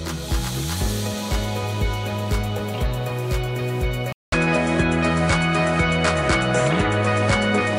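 At 4.12 s the input likely switched to a poorer device; after a 200 ms silence, nothing above 10.5 kHz survives, the level shifts, and faint new noise appears.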